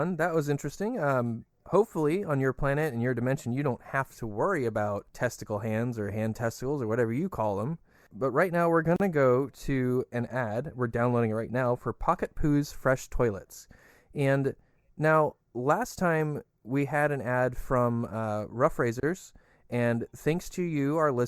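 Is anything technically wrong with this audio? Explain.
Yes. There is a gap at a join of encoded pieces at 8.96 to 9.00 s (37 ms) and again at 19.00 to 19.03 s (31 ms), repeating at a 10 s spacing. Each separately encoded piece kept its encoder start delay and last-frame padding, so the speech briefly drops into silence with smeared edges, then resumes where it stopped.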